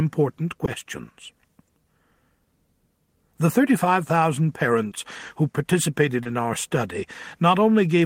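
Short concealed packet loss occurs at 0.65 to 0.69 s, 4.89 to 4.93 s and 6.23 to 6.27 s. Each time, about 20 ms of audio failed to arrive at the decoder in time. The receiver covered the gap by extending the preceding sound, either carrying its pitch forward or shaping noise to match, then crossfading back into the real signal. Each spot is heard as a brief smear or wobble where the original detail is missing.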